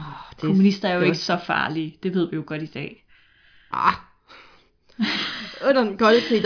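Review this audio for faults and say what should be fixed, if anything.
Nothing needs fixing: the speech signal is intact, and no technical faults can be heard anywhere in the recording.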